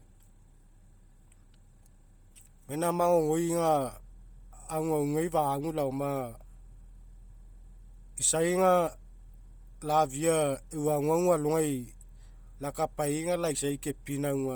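Throughout the speech, heavy codec damage gives a breathy, grainy edge. The upper spectrum sounds noise-filled rather than detailed, though content reaches 20.1 kHz. This is likely Bluetooth LC3 compression, consistent with 10 ms frames and a low bitrate near 32 kbps.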